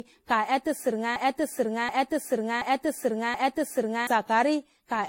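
Throughout, the speech sounds swirly and hollow with blurred attacks, likely generation loss from about seven passes through AAC near 64 kbit/s; a spectrogram shows nothing above 16.5 kHz and scattered spectral holes. From 1.16 to 4.07 s, a broken-record loop repeats a 0.73 s fragment four times, likely a stalled stream, appearing as identical repeating blocks on the waveform.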